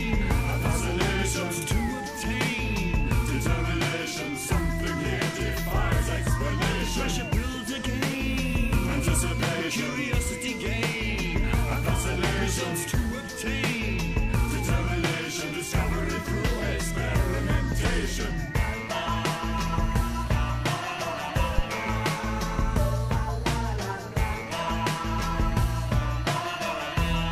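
At 21.58 s a phantom power thump appears, lasting until 21.64 s: a supply switched on or off on a live input sends a voltage step through the coupling capacitors, producing a deep low-frequency thud peaking at about -10 dBFS and decaying within roughly 13 ms.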